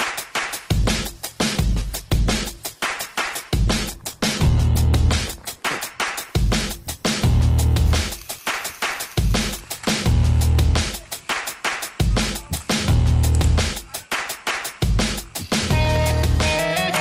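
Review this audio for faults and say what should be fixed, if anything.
From about 0.71 s to 9.19 s there's a call bitrate drop: the sound goes rough and muffled, which fits the encoder falling from around 64 kbps to 14 kbps, coding coarsely and trimming the highs, with the worst stretch lasting about 4.4 s. Set a sensible minimum bitrate and make bandwidth estimation recover faster after a dip.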